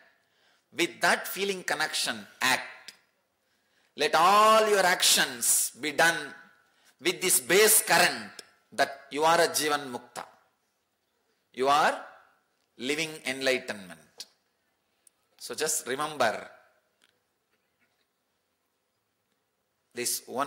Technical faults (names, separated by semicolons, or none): none